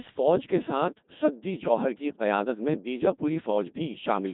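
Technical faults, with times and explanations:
Throughout: Codec 2 vocoder. The speech is rebuilt from transmitted pitch, voicing, energy and spectral-envelope parameters rather than the original waveform, so it comes out robotic and buzzy. The heavy damage fits a 2.4 kbit/s mode, where sine-wave synthesis leaves little natural texture.
1.62 to 1.69 s: bit errors on digital voice radio. For a short stretch the synthetic voice lurches in pitch, level and tone colour and briefly turns into warbling gibberish. This points to corrupted bits in a few consecutive vocoder frames, at an error rate of a few percent.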